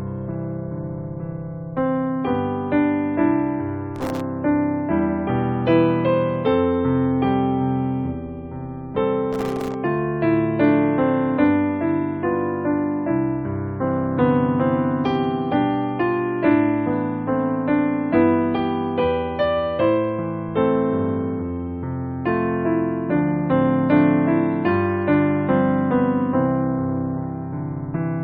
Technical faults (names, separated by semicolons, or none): processor overload crackle